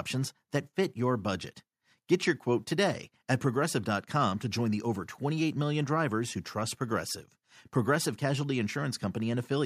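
Nothing technically wrong turns up in this bit of speech, so there's no fault to pin to a time or trace to a cause.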